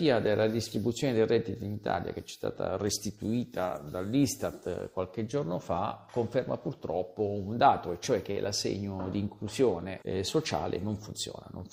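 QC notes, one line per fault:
8.31 to 8.38 s, short stall from a late packet. The sound hangs for an instant, one moment held too long with a faint buzzy texture or a slight dip in level. A packet arrived late and the jitter buffer ran dry. The receiver stretched the last audio to cover about 50 ms, then resumed exactly where it left off. Nothing is lost. Playback simply sits about 50 ms later from this point on.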